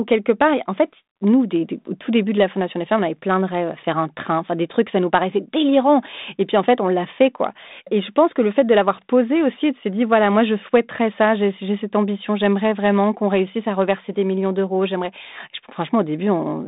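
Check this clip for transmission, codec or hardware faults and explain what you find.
Listening through, nothing stood out beyond the expected narrowband telephone sound of 32 kbit/s G.726 coding, with nothing above about 3.8 kHz.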